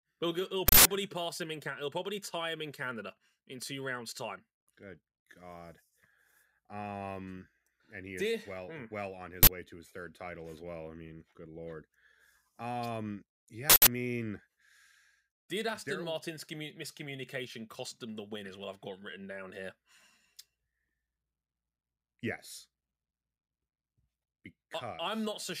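At 0.68 s, just before "pass him in", a loud 0.17 s burst of digital noise breaks in. This is an uninitialised buffer. Stale memory was played out as samples. It recurs at 9.43 s for 0.04 s, between "well hmm well on" and "way to his third". It recurs again at 13.70 s for 0.17 s. These lengths fit 8192- and 2048-sample buffers.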